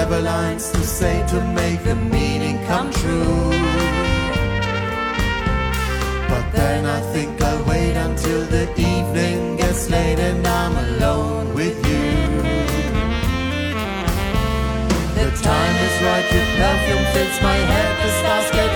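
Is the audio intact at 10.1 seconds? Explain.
Yes, the audio is intact at 10.1 seconds, with no fault audible at that moment.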